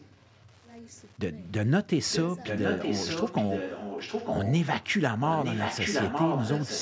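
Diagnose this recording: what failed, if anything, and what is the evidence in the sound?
Wi-Fi interference at the analogue wiring stage: a faint, steady tick runs through the whole clip at about ten per second, with a 102.4 ms period, roughly 40 dB below the speech. A nearby radio's beacons are being rectified by the audio circuit and added to the signal.

Echo leak in call processing: a delayed copy of the speech trails it by 915 ms. Faint scraps appear at 0–0.46 s, 0.89–1.02 s, 1.45–1.68 s and 4.82–4.87 s. Near-full-level stretches, only slightly below the speech, run at 2.1–4.66 s and from 5.26 s to the end. The likely cause is a far-end loudspeaker whose echo canceller failed to remove what its microphone picked up.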